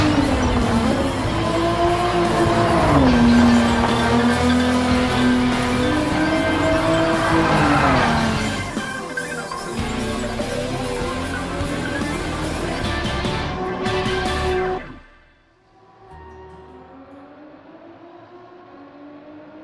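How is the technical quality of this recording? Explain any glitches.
No glitches, dropouts or transport faults turn up anywhere in the recording, so there is nothing to explain.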